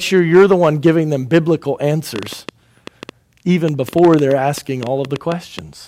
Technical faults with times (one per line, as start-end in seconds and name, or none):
2.16-5.60 train of clicks